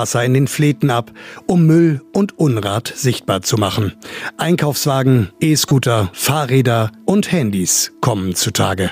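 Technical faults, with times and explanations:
5.68–5.72 s: corrupt frame decoded. One damaged compressed frame was played anyway. Misread data put energy at wrong frequencies, giving a brief, loud chirp, squeak, blip or burst of noise, peaking near -10 dBFS.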